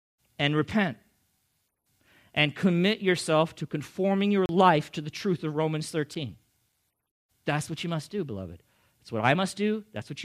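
At 4.46 to 4.49 s, between "yourself to conforming your" and "life to the truth", a 32 ms block of digital silence leaves a short hole. Another, 7 ms, ticks at 6.15 s. Samples were zeroed, likely from an unfilled output buffer.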